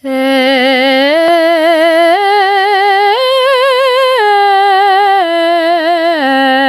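A music recording with gain pumping all the way through: the gain ducks by around 5 dB under each loud sound, squashing the dynamics. Unlike a noise gate, the floor never cuts out. Likely cause: excessive input gain into a fast limiter.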